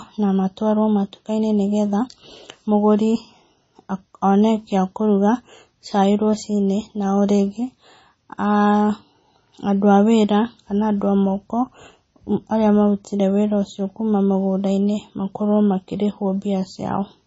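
From start to finish the speech has a watery, swirling texture, with nothing at all above 7.7 kHz, so the top of the sound is dull and cut off sharply. The damage is heavy throughout. This is likely MP3 compression at a low bitrate, which fits roughly 24 kbps. Starved of bits, the encoder removes all treble above a fixed frequency and drops quieter frequency components that flicker in and out between frames, producing the swirl.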